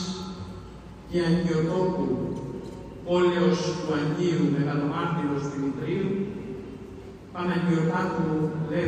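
No technical faults can be heard anywhere in the audio, and the signal stays steady and intact throughout.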